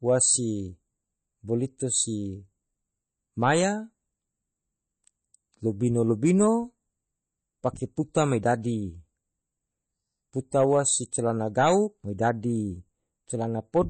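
Throughout the speech, an encoder starved of bits, likely MP3 compression at a rate that fits about 32 kbps, cuts the treble and drops weak frequency detail. Nothing remains above 8.3 kHz, so s sounds are dull, and the plainly audible damage sounds watery and swirling.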